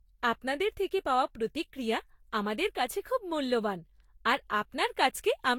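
Throughout the speech, generation loss gives a swirly, hollow smear and blunted consonant attacks, likely from around seven successive lossy encodes consistent with Vorbis near 72 kbit/s. A spectrogram shows stacked spectral holes, smeared onsets and nothing above 19.4 kHz.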